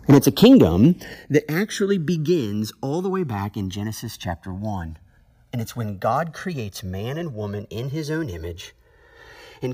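From 0.1 to 0.86 s the loudest syllables carry a harsh, crackling edge with flattened peaks. This is microphone overload: the input level is likely set too high, so the peaks hit the converter's ceiling and their tops are sheared off, overshooting by about 7 dB. Only a small share of samples are flattened, but the clipping adds buzzy harmonics to the loudest syllables.

Inside that overload, at 0.13 s, the whole signal, voice and background alike, drops abruptly by about 2 dB. It drops again at 1.14 s by about 7 dB, the largest step, and once more at 2.16 s by about 1 dB. This pattern is the microphone volume stepped down. Each step likely comes from the call software reacting to the hot, distorted input by lowering the device's input volume in one jump instead of fading it. The result sounds like a staircase of level changes rather than a smooth correction.

Across the whole clip there is also a slow flanging, which comes from the channels being summed to mono after the two channels drifted apart. 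The channels likely come from devices running on separate clocks. The drift fits a clock mismatch of roughly 200 parts per million, and the delay between channels grows to about 2 ms by the end. As the delay changes, the comb-filter notches sweep slowly through the spectrum, giving the audio a hollow, swirling, phasey colour.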